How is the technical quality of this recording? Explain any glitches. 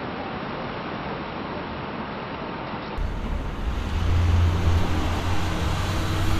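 The first three seconds are band-limited and slightly quieter, then the sound opens up. From 0.0 to 2.98 s the audio has nothing above 5.6 kHz, about 5 dB lower level and a faint added noise floor, roughly 50 dB down. This likely comes from the input switching to a poorer device, whose narrower passband makes the opening dull and boxy before it clears with no gap.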